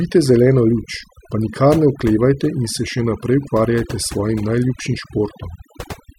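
Throughout the speech, overdone noise removal pulls frequency bands near the noise estimate far down, leaving a lowered background that breaks up into twinkling specks.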